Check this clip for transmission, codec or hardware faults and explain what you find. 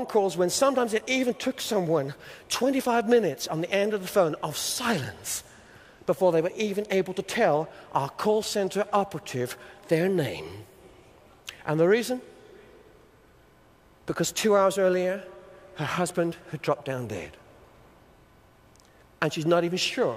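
No transmission, codec or hardware fault can be heard anywhere in the clip. The audio holds together with no breaks or disturbances that would point to a problem in the chain.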